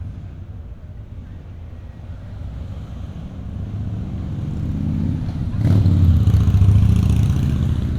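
No technical faults can be heard anywhere in these sounds.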